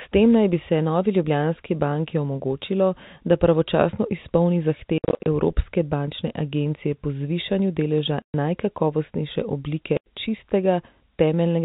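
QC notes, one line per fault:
4.98–5.26 s, 8.22–8.34 s, 9.97–10.06 s: packet loss filled with silence. Speech drops to dead silence with hard edges. The first gap follows "omogočilo da pravočasno izpolni" and loses 180 ms in bursts of up to 60 ms spread over 280 ms. Then 120 ms is lost after "po zvišanju deleža" and 90 ms after "po zvišanju deleža najkakovostnejše". All gap lengths fit 10 ms packets. Unlike concealed loss or a fade, nothing is repeated or smoothed over the holes, and the narrow G.711 telephone band stays intact around them.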